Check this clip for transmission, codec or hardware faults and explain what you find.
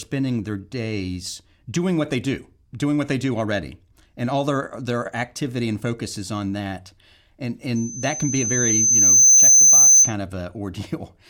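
From 7.75 to 10.14 s there's loudspeaker feedback squeal: the mic re-amplifies its own speaker until a 6.2 kHz tone swells over about a second and a half, ending well above the speech.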